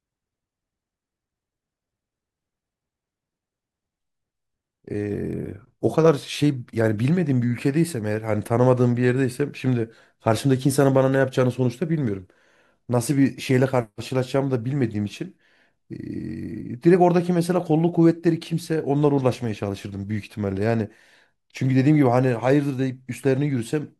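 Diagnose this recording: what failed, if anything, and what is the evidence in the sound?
Nothing failed: the recording has no audible fault, and there is no evidence of one anywhere in the sound.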